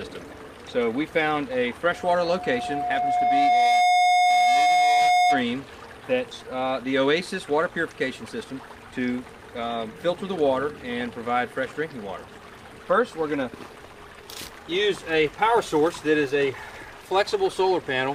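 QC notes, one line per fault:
1.94–5.48 s, loudspeaker feedback squeal: a 720 Hz tone rises out of the sound over roughly two seconds and ends up about 10 dB above it. The microphone is hearing the loudspeaker it drives, and at 720 Hz the loop gain is above one, so that single frequency keeps feeding itself. A narrowband hum or interfering tone holds a steady level. This one swells into a howl, and that growth is what identifies it as feedback.
6.31 s, skip ahead: playback jumps forward here with no gap and no filler, so the audio on either side is joined almost directly. Roughly a second of material never plays, and the delay shrinks by about the same amount, which points to audio being discarded while later audio was already queued. A dropout would leave silence or a concealment fill in that spot. Here the missing second simply disappears and the sound continues from a later point.
6.41–7.70 s, jitter buffer speed-up: straight after the jump the audio runs about 8% fast and keeps its pitch. 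Over this stretch the receiver trims short pitch-period slices, about 100 ms in total, to work off the extra audio it had buffered. The result sounds hurried. It is not a tape-style speed change, because that would raise the pitch along with the tempo, and it is not a single skip either, because the time is removed in many small cuts instead of one.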